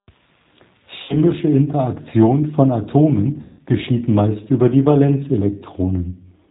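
Throughout the speech, the G.729 codec at 8 kbit/s leaves plainly audible damage: a slightly rough, synthetic texture, because each 10 ms frame is rebuilt from a vocal tract filter, a pitch predictor and a few pulses rather than the original waveform. On a spectrogram, nothing appears above 4 kHz. The harmonics look smeared and grainy, with pulse-like speckle between them instead of clean striations.

From 1.03 to 1.19 s, VoIP packet loss concealed by the speech codec fills about 60 ms of missing audio, which fits three 20 ms packets. The decoder keeps repeating its last pitch and filter with falling gain, so the sound stretches into a buzzy tone or coloured noise that fades. The concealed frames corrupt the decoder's memory, and the following speech stays weak or distorted for tens of milliseconds after the packets return at about 1.19 s. On a spectrogram, the frozen harmonics appear as flat horizontal lines, and the waveform shows a decaying envelope. 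A longer loss of about 180 ms, consistent with nine packets, occurs from 3.41 to 3.61 s, ending just before "geschieht meist über die". Here the concealment lasts longer. The spectrogram shows frozen, fading harmonics, and the waveform dips in level before the speech recovers.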